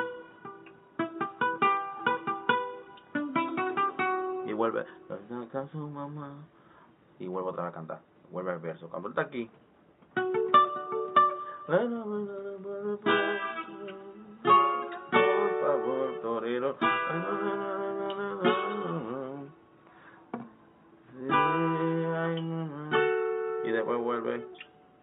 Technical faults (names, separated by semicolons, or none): none